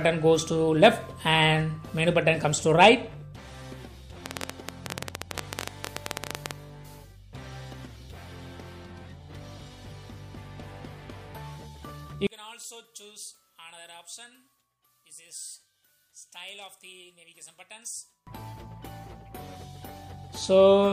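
From 4.26 s to 6.52 s, a train of clicks sits over the sound. The clicks come about 15 times a second, at an uneven pace. There are roughly forty of them, and each one is alike in shape. They stand well above the sound, around 15 dB louder at their peaks. They tick and pop through the quieter gaps too. The likely cause is electrical interference or a faulty connection or power supply injecting brief pulses.

From 12.27 s to 18.27 s, one channel sounds inverted. One side has its polarity flipped, which is the likely cause of what follows. When the two channels are summed to mono, everything common to both cancels. The level drops by about 25 dB. Centred material and bass almost disappear. What remains is the difference between the channels, faint.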